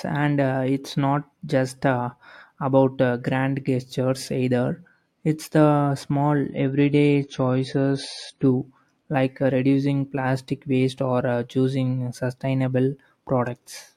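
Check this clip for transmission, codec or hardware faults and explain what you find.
One fault is present. Adaptive stream at a lower bitrate, 6.50 to 8.50 s: the connection slowed and the player switched to a leaner version, consistent with a drop from about 128 to 32 kbit/s MP3. The speech abruptly loses everything above 11 kHz and turns grainier, then recovers, with no gap.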